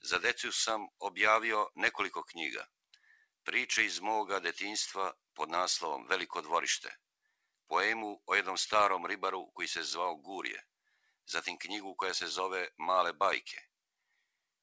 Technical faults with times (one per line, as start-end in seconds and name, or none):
2.67-3.27 sound cut by the noise suppressor
10.87-11.27 sound cut by the noise suppressor